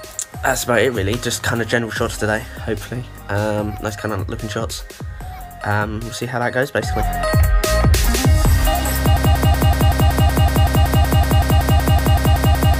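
From 9.17 s to the end, a broken-record loop repeats one 188 ms fragment identically 19 times with no decay, unlike echo. The player or stream likely stalled, losing the rest.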